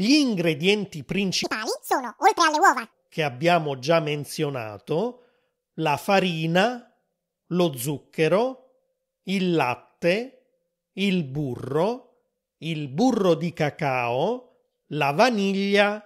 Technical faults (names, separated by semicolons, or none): audio read two samples at a time (double speed)